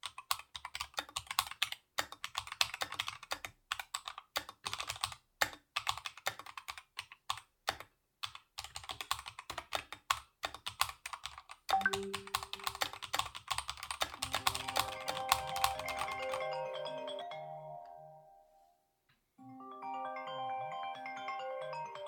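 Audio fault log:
12.56–17.22 s: doubled audio track. An equally loud, dry copy trails by about 300 ms and cuts in and out abruptly, likely from a slower second capture path.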